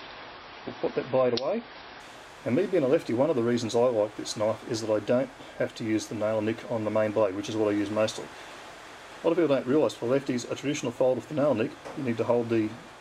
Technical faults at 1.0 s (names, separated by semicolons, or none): adaptive stream starting at a low bitrate